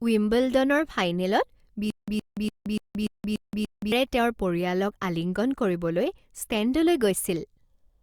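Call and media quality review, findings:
Stutter with silent gaps, 1.90 to 3.92 s. A 117 ms speech fragment repeats 7 times, each followed by about 174 ms of digital silence, on a steady 291 ms cycle. Likely a playback or stream stall: each retry replays the last buffered fragment and then runs dry. The speech that should have played in that span is lost.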